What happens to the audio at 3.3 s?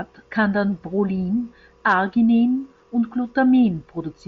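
Nothing goes wrong at 3.3 s; the speech carries on intact through that moment, heard through the light, band-limited character of the mSBC Bluetooth headset link.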